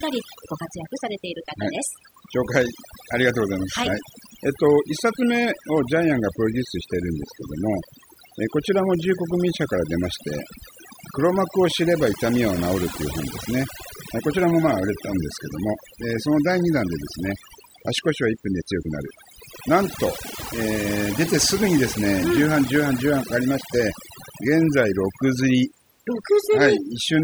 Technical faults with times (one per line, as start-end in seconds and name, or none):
0.00-27.23 overdone noise removal